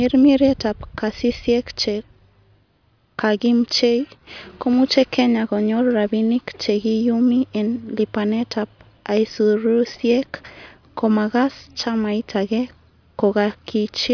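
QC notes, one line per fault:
No technical faults can be heard anywhere in this speech recording, and the signal holds a steady, intact technical state throughout.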